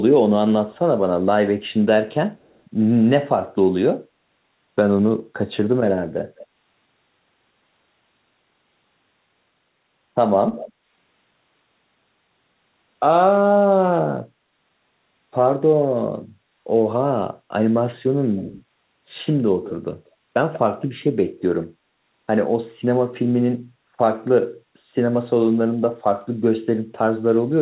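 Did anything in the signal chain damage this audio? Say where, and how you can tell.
Yes, at the call-processing stage: echo leak at 1.67, 2.35, 6.36, 10.52 and 18.37 s, plus 19.64–21.42 s. A copy of the speech trails by 185–220 ms, faint early and stronger later. The likely cause is a loudspeaker-side echo canceller passing its microphone pickup back. Spectrograms show ghost harmonics shifted right.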